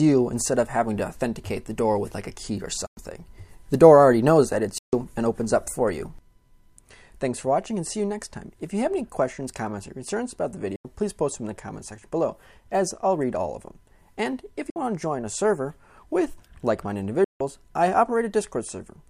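Packets on what is likely a Bluetooth link arrive too late and are discarded, so the audio shows five Bluetooth dropouts: abrupt silences at 2.87 s (about 100 ms), 4.78 s (145 ms), 10.76 s (87 ms), 14.70 s (58 ms) and 17.24 s (160 ms). Each gap cuts in sharply, and when the sound returns it has moved on, as though it kept playing through the hole, so material is skipped rather than delayed.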